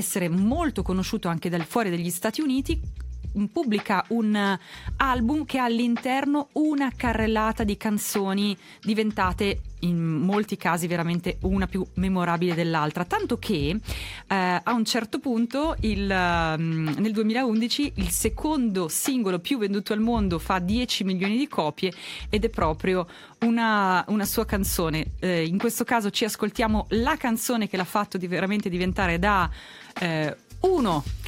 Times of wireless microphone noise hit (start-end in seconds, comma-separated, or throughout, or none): none